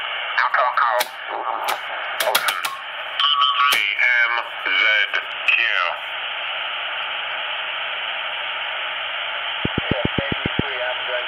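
A train of clicks runs from 9.65 to 10.60 s: about seven near-identical ticks at a regular 7.4 per second, standing roughly 15 dB above the sound, likely from electrical interference or a faulty connection. Their steady spacing and matched shape set them apart from random crackle.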